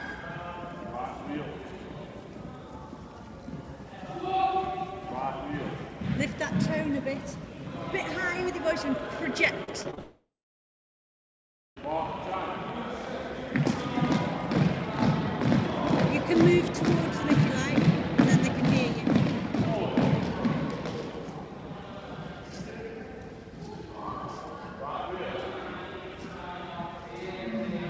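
From 8.92 to 13.06 s there is a train of clicks, about 70 regular pops at 14.3 per second, peaking about 5 dB above the sound. Likely nearby electrical interference.

From 9.64 to 9.99 s, repeated packet loss leaves four holes, the longest 35 ms. Patching covers about a quarter of the span, so the sound turns choppy and robotic.

From 9.99 to 11.78 s comes a long network dropout, likely a stall in delivery. A fading buzz continues the last sound, then about 1.5 s of silence follows, over G.722 audio with nothing above 8 kHz.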